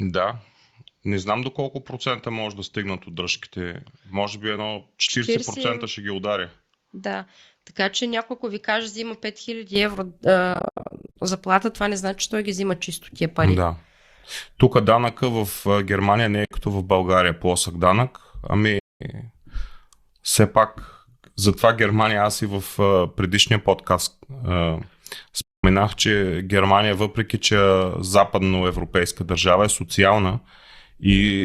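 For the first 9.76 s the sound is dull and slightly quieter, about 5 dB down, with nothing above 7.6 kHz and faint new background noise. It then opens up again without any gap. The likely cause is the input switched to a poorer device for that stretch.

Soft-edged holes follow, fading out and back in. From 10.54 to 11.16 s, just before "заплата това не значи", short dropouts are scattered across 620 ms, totalling 380 ms, the longest under a tenth of a second. A 60 ms gap comes at 16.45 s after "не е", a 220 ms gap from 18.79 to 19.01 s after "плосък данък", and another 220 ms gap from 25.42 to 25.64 s. This is AAC frame loss with muting: the decoder silenced the missing frames, and the overlapping windows smooth each edge.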